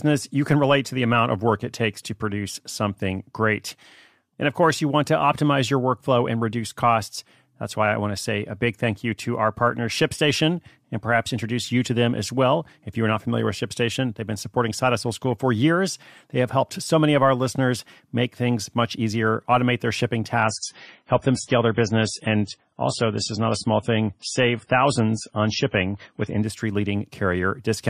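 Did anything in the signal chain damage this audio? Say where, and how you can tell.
Yes: an adaptive stream at a lower bitrate runs from 20.4 to 26.4 s, right after "easier automate their shipping". At that point the speech switches abruptly, with no gap, to a duller, smeared version. Nothing survives above 10.5 kHz, and codec artefacts rise. The damage happens at the network stage. The connection slowed, so the player swapped to a leaner encoding of the same stream, which sounds like a drop from roughly 128 kbit/s MP3 to around 24 kbit/s.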